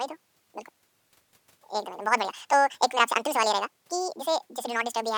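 A speech recording whose playback took pairs of samples as single frames, so the audio was read two samples at a time (double speed) from start to finish. Everything runs twice as fast and 12 semitones (one octave) high.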